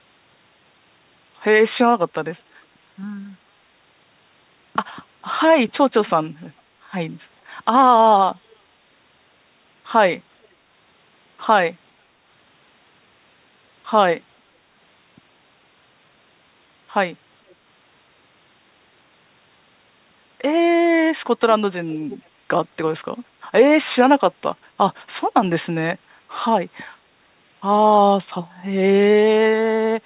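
Short echo leak scraps turn up at 8.5–8.56, 10.43–10.47, 17.49–17.55 and 22.1–22.18 s: faint copies of the speech trailing by about 455–460 ms, most noticeable at 22.1 s. Likely a far-end echo canceller letting some loudspeaker pickup slip back through.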